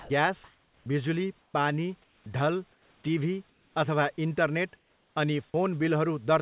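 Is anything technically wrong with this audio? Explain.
Yes. Sound dropped by the voice detector, 0.0 to 0.1 s: the opening 100 ms is steady noise instead of speech, likely because the detector misjudged it as background. On a spectrogram this shows as a flat, uniform wash.

Comfort noise in place of the background, at 0.44 to 0.86, 1.42 to 1.54, 2.04 to 2.26, 2.72 to 3.04, 3.50 to 3.76 and 4.76 to 5.16 s: the room background in the pauses becomes featureless synthetic hiss, about 1 to 4 dB quieter, likely from discontinuous transmission. The waveform shows small level steps, and the spectrogram shows smooth noise without texture.

Onset clipped by the voice detector, 0.82 to 0.86 s: the speech enters abruptly because its first 40 ms is missing, likely from a slow detector. The waveform jumps from low noise straight to full amplitude.

All of this sits within a band that stops at 4 kHz, which fits a narrowband G.711 call codec.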